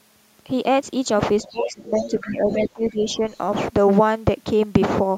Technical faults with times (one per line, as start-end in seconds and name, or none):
1.42-3.21 speech suppressed in double talk
1.48-2.34 other side's voice leaking through
3.11-3.38 other side's voice leaking through